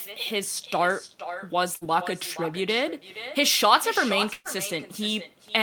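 Speech, with two faults. At the far end the call is played on a loudspeaker and re-captured by the microphone, with no echo canceller to remove it, so this talker's speech returns after the network round trip of about half a second, a thinner copy about 12 dB below the original, running throughout. Separately, bursts of packet loss forced the receiver to conceal gaps by extending the last sound and fading it: at 1.75–1.84 s it covers 58 ms, with about 60 ms of audio skipped, and at 4.33–4.48 s it covers 119 ms, ending in 20 ms of silence, with about 120 ms skipped before the speech resumes further on.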